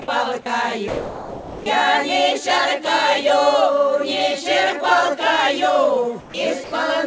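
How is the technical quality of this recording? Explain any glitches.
The recording has three short gaps. Nothing is present above 8 kHz, which points to a G.722 call codec.

Sound dropped by the voice detector occurs at 0.88 to 1.66 s and again at 6.64 to 6.72 s. The detector likely misjudged the signal as background and stopped sending, so flat hiss replaces about 720 ms and then 60 ms of sound. On a spectrogram, these appear as smooth, uniform bands.

Comfort noise in place of the background occurs at 6.20 to 6.34 s. The sender likely paused during the quiet background, which sits about 20 dB below the loud parts, and the receiver filled the gap with synthetic noise. That noise is featureless and about 5 dB quieter, so it shows as a small dip in the waveform.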